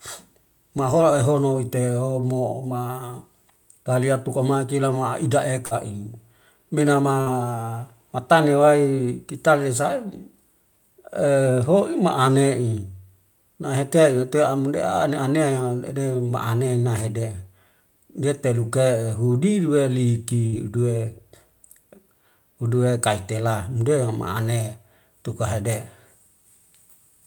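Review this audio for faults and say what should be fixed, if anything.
Bursts of packet loss at 5.65, 7.21 and 20.46 s: the last sound is held and faded, not silenced, and about 60 ms is skipped. Forward error correction or a deeper jitter buffer would prevent it.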